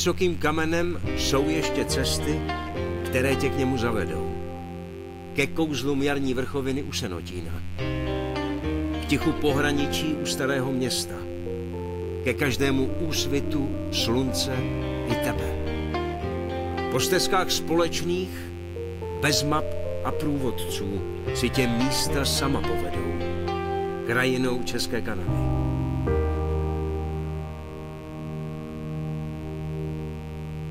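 A steady mains buzz runs through the whole recording. Switching spikes from a dimmer, rectifier or poor shielding leak in twice per 50 Hz cycle. Their harmonics climb into the kilohertz range. The result is a raspy buzz, roughly 25 dB below the signal.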